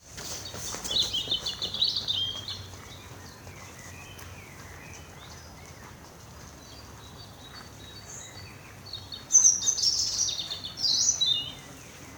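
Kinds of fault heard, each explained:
Nothing stands out here; I listened the whole way and didn't catch a single technical problem worth flagging.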